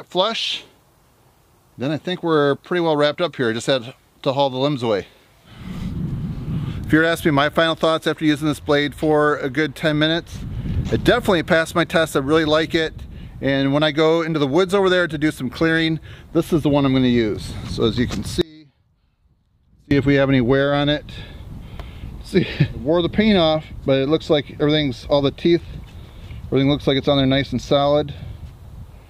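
Audio dropout to a faint residue, 18.41 to 19.91 s: the sound cuts out abruptly for about 1.5 s, then snaps back just as suddenly. The gap is not silent. A faint trace of the same sound carries on underneath, roughly 30 dB below its normal level. The likely cause is the wanted feed dropping out while the path downstream stayed live, so only a weak leak of the signal got through until the connection returned.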